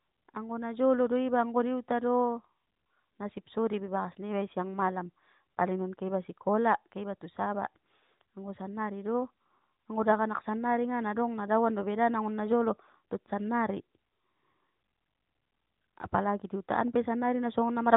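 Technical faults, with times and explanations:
No technical faults are present in the speech, which carries the narrowband character of the AMR narrowband mobile codec, with nothing above 3.8 kHz and only light coding texture that fits its 12.2 kbps mode.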